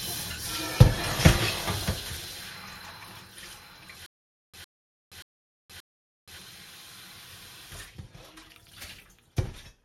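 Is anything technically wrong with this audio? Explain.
Yes. From 4.06 to 6.38 s there is a stutter with silent gaps: the same 107 ms burst repeats four times, each followed by 473 ms of dead digital silence, at an even 580 ms period. The player or stream likely stalled, replaying its last fragment at each retry, so the audio for that stretch is lost.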